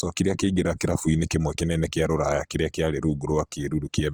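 From start to finish the speech carries plainly audible coding damage, likely from Opus compression in its CELT music mode at a rate around 24 kbps. Band energies survive, but starved bands are filled with folded or noise content, so the sound turns grainy and rough while still reaching about 20.2 kHz.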